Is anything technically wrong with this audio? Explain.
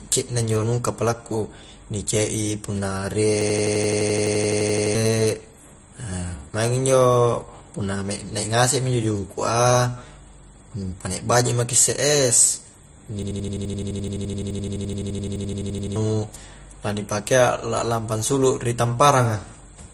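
Yes, two kinds of problem here.

Throughout the speech, the sound is band-limited, with nothing above about 12.2 kHz, and it has a smeary, doubled-up compression character. That's likely transcoding between lossy codecs: it points to an MP3 at roughly 45 kbit/s re-encoded to AAC-LC, where each pass adds its own artefacts on top of the last.

There are two system hang loops. The first runs from 3.41 to 4.95 s, right after "punna rie". The second runs from 13.23 to 15.96 s, after "baji maki isse es". In each, the driver stalled while the hardware kept replaying one 85 ms chunk, which fits a 4096-sample buffer. At 11.7 repeats per second that gives a machine-gun stutter, and about one and a half seconds, then about three seconds, of real audio are gone.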